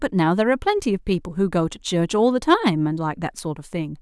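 No technical faults are audible anywhere in this recording.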